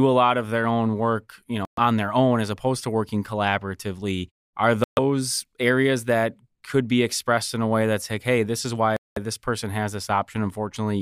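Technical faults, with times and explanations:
1.65–1.79 s, 4.84–4.99 s and 8.97–9.18 s, Bluetooth stall: the wireless link most likely stalled as interference held back packets, so the headphones' buffer emptied and playback halted while retransmissions arrived. Each time the speech drops abruptly to silence, for about 124 ms, 132 ms and then a longer 200 ms, before resuming cleanly. The clean restart after each gap is what sets these apart from a crackle or a dropout of the signal itself.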